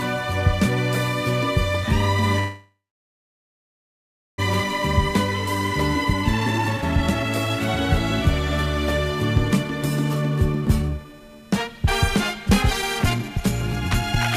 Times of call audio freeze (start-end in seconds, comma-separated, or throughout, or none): 2.39-4.40